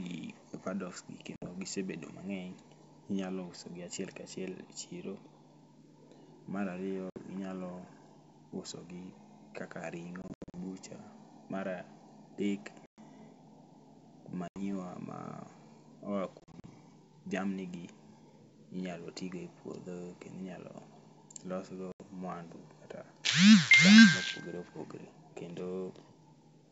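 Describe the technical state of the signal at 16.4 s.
Packet loss on an ADPCM call, 16.40–16.65 s: about 120 ms dropped in gaps up to 40 ms. Each silent hole desyncs the decoder's predictor, so speech returns slightly distorted.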